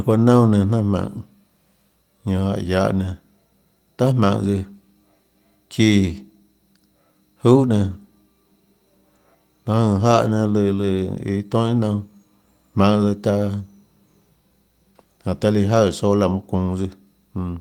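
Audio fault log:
10.11 s, lost packet rebuilt from error correction: there's a quick rough, noisy 20 ms patch in the speech with no actual dropout, which points to one packet going missing and the decoder filling it from the low-bitrate backup copy carried in the next packet.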